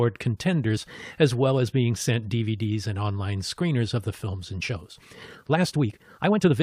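At 0.76 to 0.78 s, just before "as well as being", damaged data in the compressed stream briefly corrupts a frame. The decoder loses sync and resynchronises on the next valid header, producing a short glitch in the speech.

From 4.59 s to the end, after "screeners of the films", the speech abruptly runs about 1.47 times faster while its pitch stays the same. The result sounds rushed, likely a time-stretched section where short pieces were dropped to shorten it.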